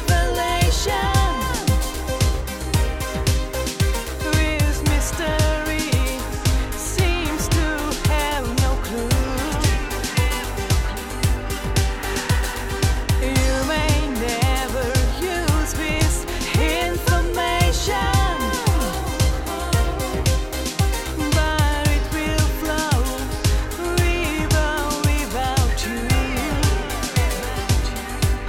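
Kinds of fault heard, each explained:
No faults can be heard anywhere in this audio.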